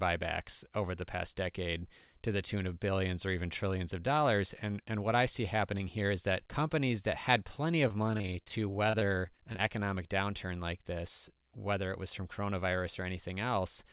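From 7.88 to 9.60 s, repeated packet loss (robotic sound) breaks the speech into a choppy stutter with pieces missing. Fifteen short gaps, none longer than 27 ms, are each patched by repeating the last sound. Unlike a single dropout, the holes keep recurring across the whole stretch, all heard through the call path's narrowband sound, with nothing above 4 kHz.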